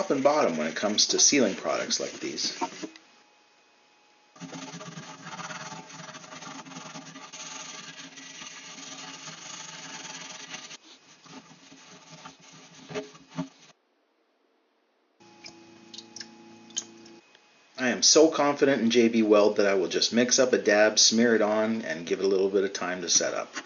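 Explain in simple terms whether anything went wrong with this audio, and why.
Nothing went wrong on the technical side: the recording holds together throughout, with no gaps, jumps, distortion or stray noise that would point to a problem in how it was captured or passed along.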